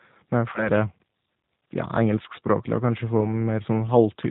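The whole clip sounds slightly rough and synthetic, thin, with nothing above 4 kHz. That is the G.729 codec, and its damage is plainly audible. The speech is rebuilt from a vocal tract filter, a pitch predictor and a few coded pulses per 10 ms frame rather than sent as a waveform, which points to an 8 kbit/s G.729A stream.

From 0.53 to 0.70 s the speech smears into a stretched buzzy tone or coloured noise that fades before clarity returns. Then from 3.17 to 3.30 s a shorter, similar blur occurs. This is VoIP packet loss concealed by the speech codec. The decoder filled the gaps by extending its last pitch and filter at falling gain. The first gap fits two lost 10 ms frames, and the second fits one. Because each frame builds on the previous one, the sound stays weak or distorted well past the missing audio.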